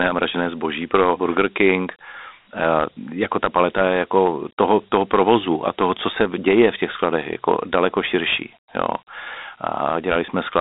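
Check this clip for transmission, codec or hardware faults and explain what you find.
One codec fault runs through the whole speech clip: Dialogic VOX ADPCM coding. Its 4-bit steps, which fit 32 kbps at 8 kHz sampling, leave a plainly audible gritty hiss tracking the speech. The band runs about 200 Hz to 3.7 kHz, with nothing above 3.8 kHz.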